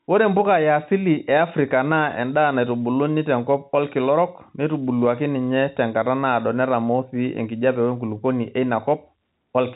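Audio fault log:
No faults; telephone-band speech, nothing above 4 kHz.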